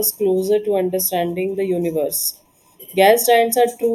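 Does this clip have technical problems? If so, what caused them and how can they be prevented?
Yes. Channel delay (comb filtering) runs throughout the speech. One channel arrives roughly a third of a millisecond behind the other, and when the two are summed to mono, their shared content cancels at evenly spaced frequencies. The first notch falls near 1.5 kHz, which leaves a hollow, phasey sound. To prevent it, time-align the channels before any mono fold-down.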